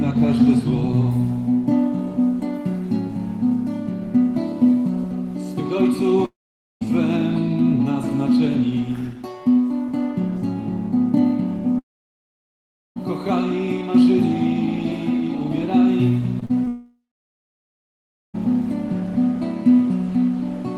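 At 6.25 to 6.83 s, 11.79 to 12.98 s and 16.68 to 18.36 s, the sound decays into a fading buzz and then falls silent for roughly 0.5, 1.1 and 1.3 s. These gaps are most likely long network dropouts. The lost audio is never recovered.

Just before the last gap, short concealed packet loss briefly smears the sound at 16.40 to 16.53 s, 16.45 to 16.51 s and 16.64 to 16.68 s, with 20 to 40 ms lost each time. This differs from a dropout because it is only hundredths of a second long and leaves no silence.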